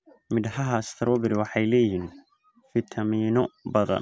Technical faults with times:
none

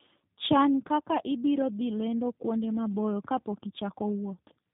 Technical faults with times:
0.00-4.74 tandem speech coding

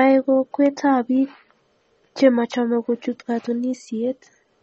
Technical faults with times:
0.00-4.62 MP3 compression

